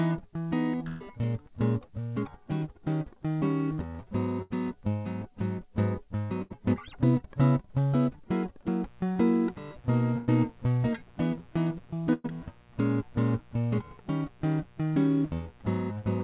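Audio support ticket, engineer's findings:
Burst of packet loss, 0.88–1.02 s, 4.42–4.52 s, 6.42–6.52 s, 10.18–10.29 s, 12.13–12.26 s. Network or jitter buffer dropped runs of consecutive packets, 80 to 120 ms each time. Receiver concealment stretched the last music frame into a held, fading tone, then the music resumes further along with the lost stretch skipped. Audible as a brief freeze-and-jump in the music at each time.

Mains buzz, 8.85 s to end. Dimmer, rectifier or missing shield on the capture side injecting 60 Hz mains interference with a dense harmonic series, sitting around 30 dB under the music. Heard as a steady, raspy buzz under everything from that point, its upper harmonics running right up to the 4 kHz ceiling of the call path.

Short concealed packet loss, 9.12–9.18 s. About 40 ms of packets arrived too late for the decoder. The gap was filled by extrapolating the preceding music and crossfading back into real audio. 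Short smear or wobble in the music. Path is G.711 mu-law band-limited to 4 kHz, which fits the standard 64 kbps call setting.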